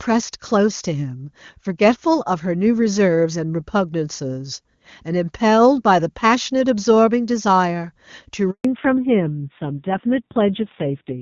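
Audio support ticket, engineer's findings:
Handover gap, 8.51–8.65 s: sound fades within tens of milliseconds, then 140 ms of dead silence. Network handover; no speech frames delivered during the switch, so the audio in that window is lost outright, not concealed.

Fallback to narrowband, 8.65 s to end: the earlier full HD Voice band collapses, nothing above 4 kHz, timbre dull and raspy. Codec drop from AMR-WB to AMR-NB; the roughness fits a low AMR-NB rate around 5.9 kbit/s.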